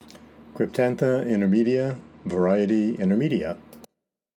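Audio in which, from 1.31 s to 3.07 s, the top end suddenly dulls and a gritty, granular noise rides on what remains, then clears as the fuller sound returns. This is a Bluetooth SBC bit pool drop: a congested link forced the encoder to spend far fewer bits, starving the upper sub-bands and quantising the rest coarsely. The sound points to the bit pool falling from about 28 to 12, roughly 96 kbps, before recovering.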